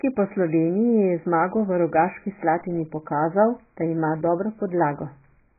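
AAC compression, throughout: nothing survives above 2.5 kHz, leaving the speech dull and warbly, likely from heavy AAC-LC coding at a very low bitrate, around 12 kbps.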